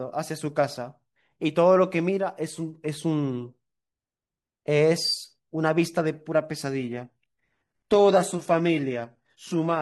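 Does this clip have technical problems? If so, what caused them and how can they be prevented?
Yes. From 6.79 s to the end at 9.81 s, the adaptive stream at a lower bitrate took over, switching down once throughput fell. The change is sudden and gapless. Codec artefacts rise, which fits a step from full-band AAC to HE-AAC near 16 kbit/s. Keeping a larger playback buffer and setting a higher minimum bitrate for the stream prevents this.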